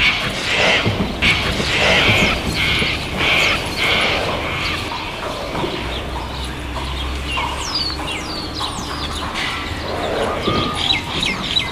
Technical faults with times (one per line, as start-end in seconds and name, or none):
1.22-4.88 doubled audio track